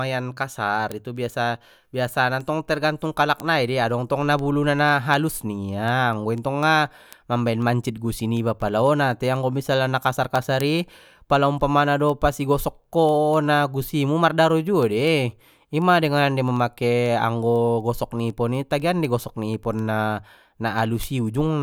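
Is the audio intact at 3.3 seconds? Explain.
No. Word clock ticks run from 0.17 to 21.53 s: an unlocked receiving clock slips one sample about every third of a second, giving sharp ticks at a steady rate, unlike random clicks.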